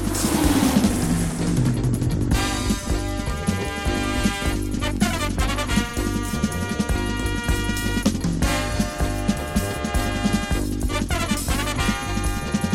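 There are no technical faults to describe in the audio, so there is nothing to place in time order.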